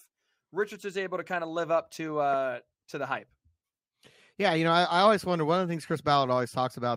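From start to finish, the speech carries a buzz. It comes from a resampler restarted on every block. Each 20 ms block was converted on its own. The sound points to a 44.1 kHz to 48 kHz conversion. At each block edge, the converter lacked the true neighbouring samples, so it left a small error there. Those errors repeat 50 times a second. They fuse into a steady 50 Hz buzz that rides on the speech and drops away in the pauses.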